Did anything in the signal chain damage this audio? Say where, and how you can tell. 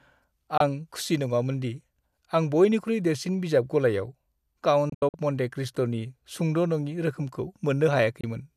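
Yes. Digital broadcast dropout at the receiver: muted holes at 0.58 s and 8.21 s, plus scattered gaps across 4.90–5.14 s, where corrupt frames were silenced.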